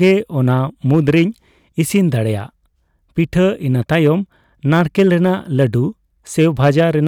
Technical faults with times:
0.02-0.12 hard clipping
0.91-1.23 hard clipping
3.92-4.09 hard clipping
4.72-5.64 hard clipping
6.40-7.08 hard clipping

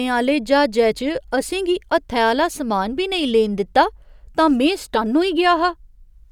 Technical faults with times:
none

